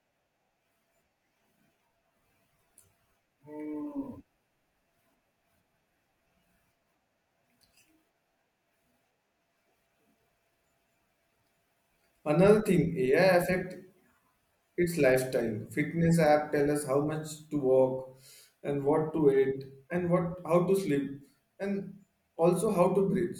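No technical faults can be heard anywhere in this speech recording. Nothing in the signal path draws attention to itself at any point.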